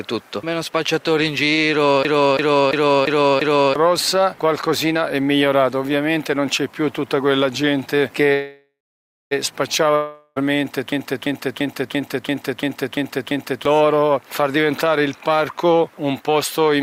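From 2.05 to 3.76 s the computer or driver stalled while the sound hardware kept replaying its ring buffer, a system hang loop. The same 341 ms slice repeats five times at 2.93 Hz, a machine-gun stutter fitting a 16384-sample buffer, and about a second and a half of audio is lost.

From 8.33 to 9.33 s a call audio freeze occurs, likely from held-up packets draining the jitter buffer. The last sound is stretched into a fading buzz, then about 560 ms of silence, and the audio resumes where it stopped. Nothing is missing, but everything after it now runs about 1 s late.

From 9.96 to 10.38 s a long network dropout is likely, with no packets arriving. The last sound is continued for about 400 ms as a decaying buzz, with no silence. The audio then picks up further on, and roughly 400 ms of it is gone.

From 10.92 to 13.65 s the system hang loop recurs, with the same 341 ms buffer cycling at 2.93 Hz. 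This time there are eight stuttering repeats, and around 3 s of audio is lost.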